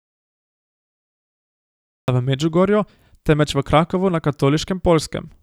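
From the very start until 2.08 s there's nothing but dead silence, no room tone at all, and then the speech comes in mid-flow. That's an audio dropout to silence, likely a lost input or a mute while the recorder kept writing silence.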